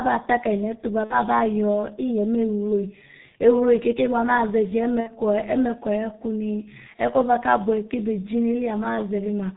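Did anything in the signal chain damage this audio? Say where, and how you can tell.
Yes. The codec stage did the broad damage. For the whole clip the speech is muffled and hoarse, with nothing above 4 kHz and smeared consonants. That heavy G.723.1 codec sound fits its 6.3 kbit/s mode, with a voice model updated only every 30 ms.

The network stage adds two dropouts, from 1.04 to 1.14 s and from 5.00 to 5.16 s. Each is stretched out and fades, which fits about 60 ms, or two frames, of VoIP packet loss concealed by the speech codec. The decoder repeats its last pitch and filter at falling gain, and the voice stays weak briefly afterwards.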